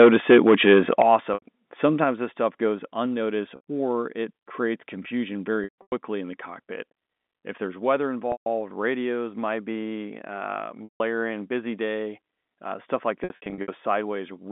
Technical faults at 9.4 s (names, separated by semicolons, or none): none